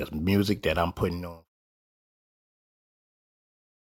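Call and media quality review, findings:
No faults found.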